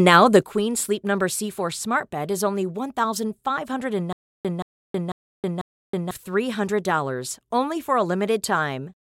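At 0.43 s, right after "now the", the speech and its background noise drop together by about 9 dB and stay there: a sudden gain jump, likely a gain change applied without a ramp. From 4.13 to 6.11 s comes a stutter with silent gaps, where a 175 ms burst repeats four times every 495 ms with 320 ms of digital silence between, likely a stalled stream replaying its last fragment.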